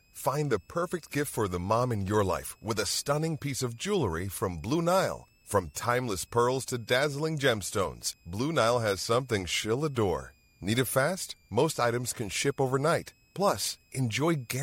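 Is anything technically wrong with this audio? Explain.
Yes. A switching supply whistle runs through the whole speech clip: a high tone, roughly 40 dB below the speech, moving between about 2.35 and 2.68 kHz. A power supply cycling in audible burst mode, or beating with another supply, causes it. Unlike mains hum, which sits low and fixed, this tone is high and shifts in pitch.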